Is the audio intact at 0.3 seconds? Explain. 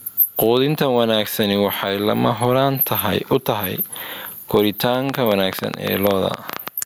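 No, gain pumping runs through the whole clip, including 0.3 s. The level swings by around 20 dB: loud and soft parts end up closer in level and the sound is squashed, likely from gain set far too high with a fast limiter clamping it down.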